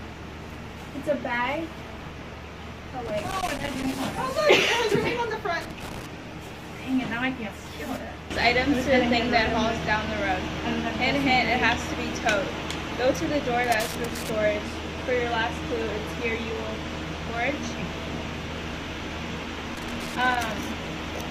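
Loose connector crackle appears at 3.06–3.93 s, 5.61–6.06 s, 13.64–14.30 s and 19.75–20.44 s. An intermittent contact chops the signal into irregular, scratchy bursts.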